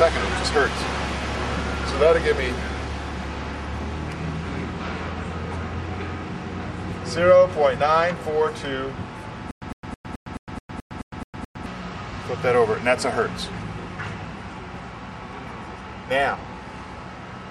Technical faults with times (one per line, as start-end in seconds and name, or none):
9.51-11.66 stutter with silent gaps